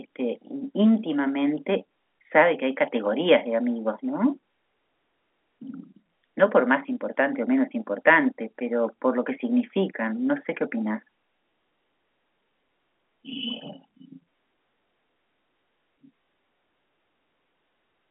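No technical faults occur at any point in this speech recording.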